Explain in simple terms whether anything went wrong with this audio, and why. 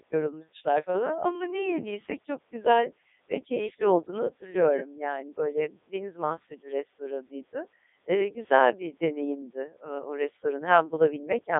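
The voice sounds robotic and buzzy from start to finish, like a talking machine, and it is thin and muffled, with nothing above about 3.8 kHz and little deep bass. This is the Codec 2 vocoder, a digital-radio system that doesn't send the actual sound wave. It sends only a rough summary: pitch, loudness, whether the sound is voiced, and its overall tone. The receiver then rebuilds the voice from simple tones, which heavily damages the natural character.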